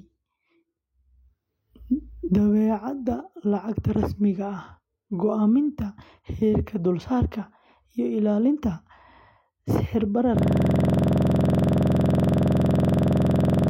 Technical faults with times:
10.39-13.70 system hang loop

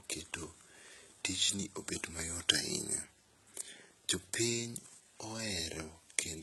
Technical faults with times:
0.00-6.42 HE-AAC compression

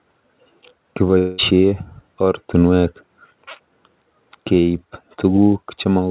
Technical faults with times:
1.18-1.40 long network dropout

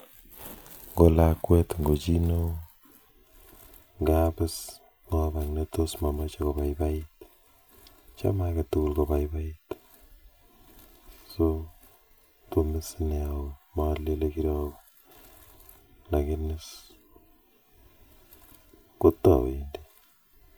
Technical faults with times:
3.11-20.58 channel delay (comb filtering)

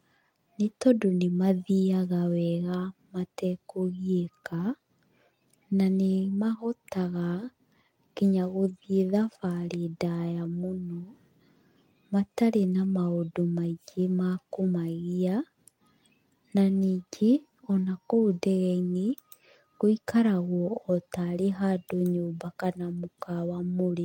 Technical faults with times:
none

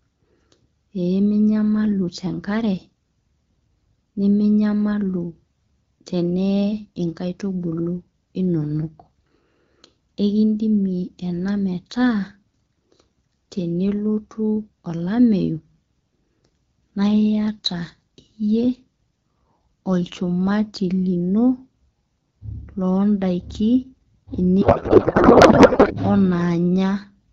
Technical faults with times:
24.61-25.96 codec payload misread

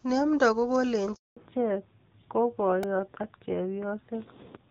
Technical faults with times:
1.15-1.37 handover gap
1.37-4.71 fallback to narrowband
2.83 repeated buffer

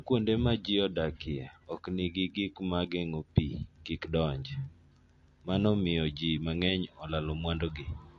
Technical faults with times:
0.00-8.19 MP3 compression

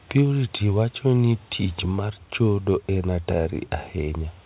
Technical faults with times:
none

